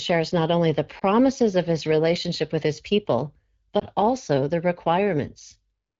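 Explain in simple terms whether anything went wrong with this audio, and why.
Two short hiccups come from lost AMR speech frames. At about 0.99 to 1.03 s, just before "of his relationship with", and at 3.79 to 3.84 s, between "relationship with his people" and "also the", a single 20 ms chunk of speech was damaged in transmission. The phone's decoder filled the gap by repeating its last good sound at lower volume, so each spot is a brief dip or warble through the wideband HD Voice codec.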